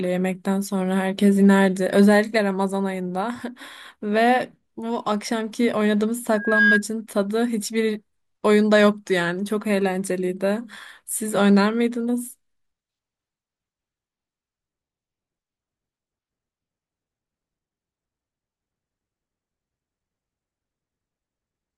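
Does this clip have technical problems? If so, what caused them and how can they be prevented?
Yes. From 6.33 to 6.83 s a single steady tone at 1.6 kHz rises out of the speech, swelling over roughly a third of a second into a squeal that ends up a few decibels louder than the speech. This is loudspeaker feedback squeal: the microphone picked up the loudspeaker it was feeding, and at 1.6 kHz the loop gain went above one, so that frequency grew on its own. Keeping microphones behind and away from loudspeakers, lowering gain, and notching 1.6 kHz would prevent it.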